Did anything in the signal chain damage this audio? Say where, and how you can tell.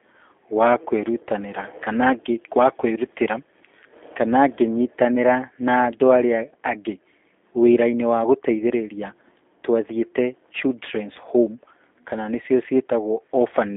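Yes, the codec stage did, and across the whole clip. This speech has the rough, slightly synthetic texture of G.729 coding, which fits an 8 kbit/s G.729A link. Each short frame is rebuilt from a vocal tract model plus a few pulses, and the band only runs from 250 Hz to 3.6 kHz.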